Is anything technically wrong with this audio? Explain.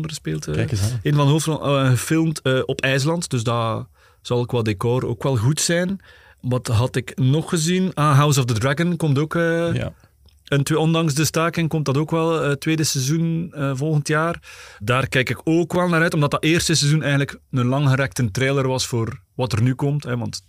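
Yes. At 15.73 to 15.76 s, between "kijk ik ook" and "wel naar uit omdat", there are chunks out of order. One 5.8 ms chunk plays three chunks late, after audio that should follow it. Nothing is lost, but the shuffled order and three hard joins cause a brief garbled jumble.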